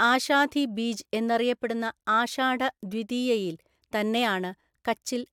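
Nothing in this short speech recording stands out as a technical fault, so there's nothing to flag along the way.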